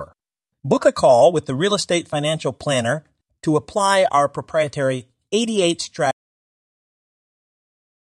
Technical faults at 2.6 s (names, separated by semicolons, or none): none